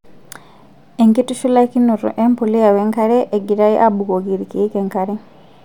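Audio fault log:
1.2–3.8 s, resampler restarted on every block: the 48 kHz to 44.1 kHz conversion was run on each 100 ms block in isolation, so every block edge lacks its true neighbouring samples. The edge errors sound as regular ticks at 10 Hz over the speech.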